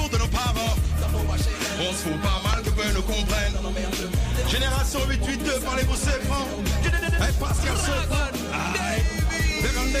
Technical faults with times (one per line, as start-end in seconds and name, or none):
2.53-2.55 loud pop
7.70-7.72 loud pop